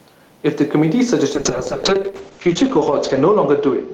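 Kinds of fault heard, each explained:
gain pumping: The background sits about 41 dB below the speech. The level swings by around 5 dB. The likely cause is gain set far too high, with a fast limiter pulling it down on every peak.
call bitrate drop: From 1.37 s to the end, the speech turns rough and muffled. The top of the spectrum falls from 20 kHz to 8 kHz, which fits the encoder dropping from 32 to 8 kbps. The sound stays at its worst for 1.58 s.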